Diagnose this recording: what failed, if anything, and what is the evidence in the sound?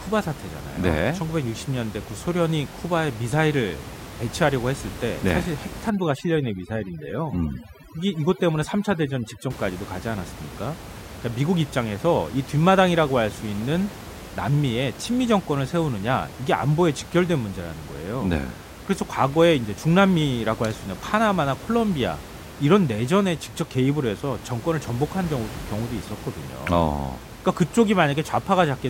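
Overdone noise removal from 5.90 to 9.50 s, in the call-processing stage. Here the background, which elsewhere sits about 15 dB below the speech as ordinary room noise, drops and breaks up into twinkling specks. The suppressor was set far too aggressively. It drove individual frequency bands down or off whenever they came close to its noise estimate, removing quieter parts of the speech along with the room noise.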